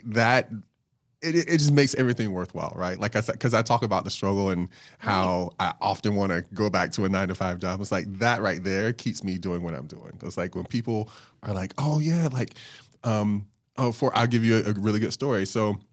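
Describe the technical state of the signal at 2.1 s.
At 2.1 s the speech is intact, with no fault; the top end stops at about 8 kHz, as expected from the Opus call path running at 20 kbps.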